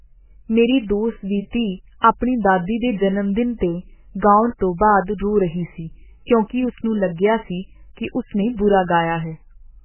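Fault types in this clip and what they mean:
MP3 compression: The whole recording is band-limited, with nothing above 3 kHz, so sibilants and consonant detail are missing and the sound is dull and muffled. The remaining spectrum sounds heavily damaged: weak components drop in and out between frames, giving a watery, swirling texture and blurred onsets. This is likely the result of perceptual coding that was starved of bits, which fits MP3 at a very low rate of around 8 kbps.
pre-echo: From about 2.00 s to 2.04 s, a hiss of roughly 41 ms comes just before a sharp onset in the speech, and the onset itself sounds soft instead of crisp. The codec spreads its quantisation noise across the whole transform block, so noise set by the loud attack also fills the quiet stretch before it. That attack falls late in its block, which exposes the noise ahead of it.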